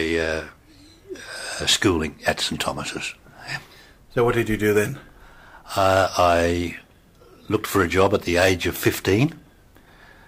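Nothing stood out on listening; the audio held steady throughout, with no audible fault at any point.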